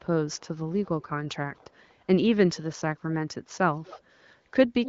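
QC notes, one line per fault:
0.33–0.48 s, 1.56–1.94 s, 3.75–4.02 s, 4.84–4.88 s: echo leak, a copy of the speech trailing about 240 ms behind and growing louder toward the end, likely from a loudspeaker echo canceller letting some through.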